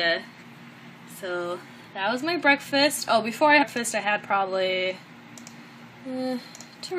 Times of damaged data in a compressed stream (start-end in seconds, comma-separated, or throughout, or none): 3.61-3.63